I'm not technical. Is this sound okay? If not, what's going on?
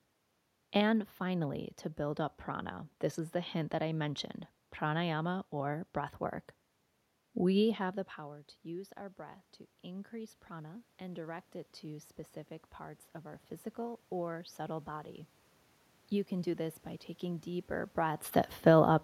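No. Automatic gain rising, from 8.16 to 14.96 s: after the talker moves back around 7.5 s, the system slowly turns itself up, so voice and room noise swell together.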